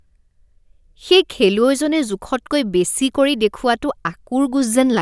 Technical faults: none

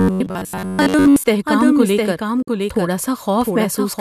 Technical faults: doubled audio track; robotic sound from repeated short buffers; digital broadcast dropout

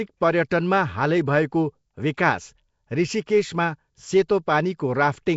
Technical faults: Nellymoser compression; pre-echo

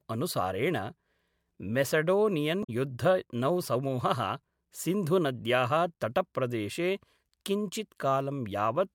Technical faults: damaged data in a compressed stream

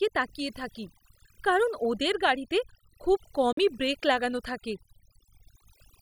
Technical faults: overdone noise removal; Bluetooth dropout

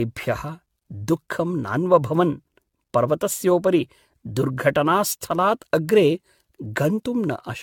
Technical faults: generation loss

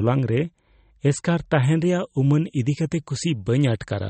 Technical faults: MP3 compression; pre-emphasis left on

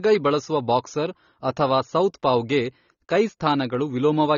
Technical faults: AAC compression

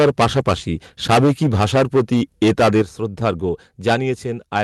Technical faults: microphone overload; microphone volume stepped down

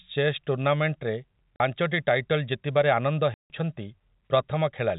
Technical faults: packet loss filled with silence

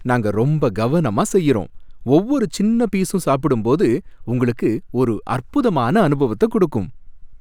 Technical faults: none

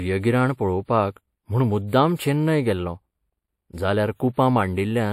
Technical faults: channel delay (comb filtering); transcoding between lossy codecs

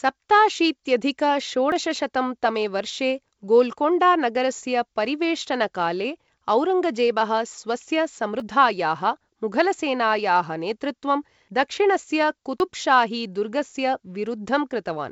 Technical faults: dropped buffer (overrun)

